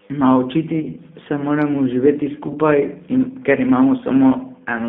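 G.729 coding runs through the whole speech clip at 8 kbit/s. The speech is rebuilt from a vocal tract filter, a pitch predictor and a few pulses per frame, in a band of about 150 Hz to 3.6 kHz. It sounds plainly rough and synthetic.

VoIP packet loss concealed by the speech codec occurs from 0.82 to 0.88 s, just before "se moramo živeti", and again from 2.47 to 2.52 s, just after it. Each time about 20 ms went missing, which fits a single lost packet. The decoder stretched its last pitch and filter into a brief fading sound.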